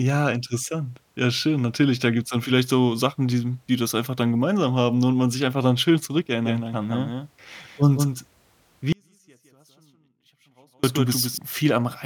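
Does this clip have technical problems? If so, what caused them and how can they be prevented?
Yes. From 6.46 to 11.38 s there is a doubled audio track, most likely from a second, slower capture path being mixed in. It lays a full-band copy of the speech about 150 ms late and roughly 5 dB quieter, with abrupt entry and exit. Prevent it by routing each source through a single monitored path and muting duplicate inputs.

From 8.93 to 10.84 s there is an audio dropout to a faint residue, likely a broken signal feed into a stage that stayed live. The speech cuts out abruptly for 1.91 s, leaving only a faint trace about 35 dB down. Prevent it by securing connections and monitoring input levels so lost feeds are caught immediately.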